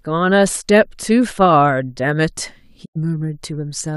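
At 2.84 s the receiver stopped getting usable digital frames, either because the signal dropped out or because the frames failed their checksum. It muted the output rather than play corrupted data. This digital broadcast dropout lasts until 2.97 s. The speech fades out over about 20 ms into a short silent hole, roughly 96 ms of programme goes missing, which fits a handful of lost frames, and the speech resumes further on with that stretch gone.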